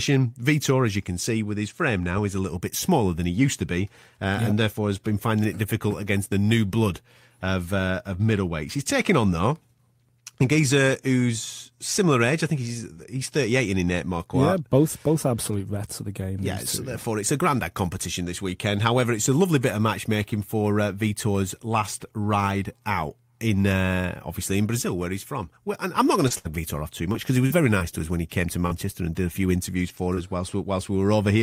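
At 12.93 s a short concealed packet loss occurs: about 20 ms of speech failed to reach the decoder in time, and the receiver extended the preceding sound for roughly 26 ms before blending back into the real signal. Because the fill is only an extension of what came before, it comes across as a brief smear or wobble in the speech.

Straddling that moment and just after it, there are two instances of a lost packet rebuilt from error correction, at 12.96 s and 13.02 s, each 20 ms. The following packet in each case carried a low-bitrate copy of the missing one, so the decoder played that backup instead of leaving a gap. Those two frames sound rougher and grainier than the surrounding speech, a short patch of coarser texture rather than a dropout.

From 26.28 s to 30.43 s, right after "I'm not going to", scattered short gaps appear: roughly seven separate packets went missing or arrived late, spread across that stretch, with the longest hole around 70 ms. 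Each was patched by continuing the previous sound, roughly 200 ms of filled audio in all, about 5% of the span. The speech remains clear, but is punctuated by brief ticks, smears and hiccups.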